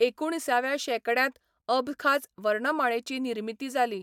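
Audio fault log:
No technical faults can be heard in this speech clip. There is nothing to log.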